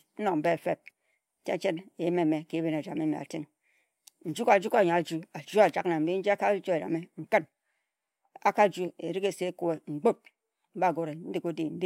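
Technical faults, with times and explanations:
No technical faults can be heard anywhere in this speech recording.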